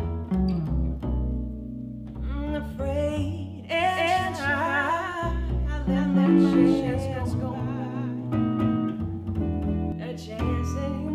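A doubled audio track runs from 3.80 s to 9.92 s: a second, full-band copy of the sound sits roughly 300 ms behind the original at about the same level, so everything is heard twice in close succession. The copy carries no decay or room colour, unlike a reflection, and it cuts in and out abruptly at those times. The likely cause is the same signal being captured again through a slower path and mixed back in.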